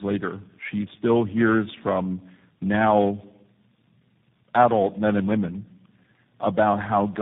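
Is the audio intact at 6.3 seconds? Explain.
No, at 6.3 s the speech carries tandem speech coding, as it does for the whole clip. It passed through four speech codecs in a row, ending in G.729A, each re-coding the last one's damage. It sounds rough, muffled and warbly, with nothing above 3.8 kHz.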